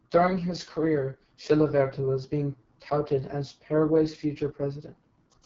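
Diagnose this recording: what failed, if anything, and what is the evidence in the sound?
AMR wideband (HD Voice) codec damage runs through the whole speech clip at the codec stage. The speech sounds rough and raspy, and nothing reaches above about 7.4 kHz. That harshness fits the lowest 6.6 kbit/s mode, where the pulse-excited vocal tract model has too few bits to rebuild speech cleanly.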